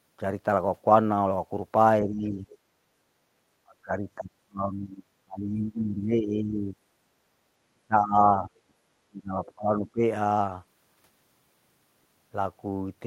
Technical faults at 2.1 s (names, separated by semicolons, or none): speech suppressed in double talk